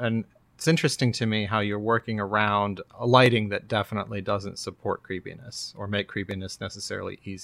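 Sharp single clicks occur at 2.00, 3.26, 4.64 and 6.31 s. These are likely dropped samples. Under a millisecond goes missing, so the waveform jumps.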